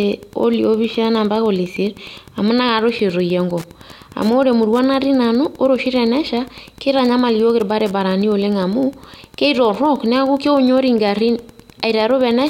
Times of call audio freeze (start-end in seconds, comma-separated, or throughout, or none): none